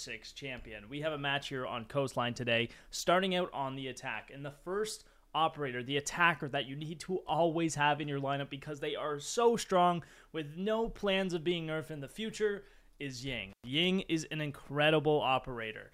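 At 13.50 s the sound drops out briefly in a classic intermittent contact fault, with the disturbance spanning roughly 13.50 to 13.67 s. A loose plug or cable connection opens for about 108 ms, breaking the signal path. The dropout is bracketed by crackle as the contact breaks and then remakes, and during the open interval a faint hiss remains before the audio returns.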